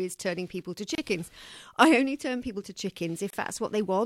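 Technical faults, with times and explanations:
0.95 s and 3.30 s, gap at a join of encoded pieces: after "turning people to" and "only turn people to", speech drops out for 29.5 ms and 28.4 ms, then resumes seamlessly. Separately encoded pieces were joined with encoder delay and final-frame padding left in.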